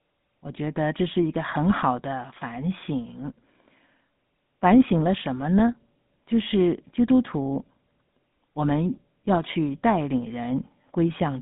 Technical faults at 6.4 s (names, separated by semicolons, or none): GSM full-rate codec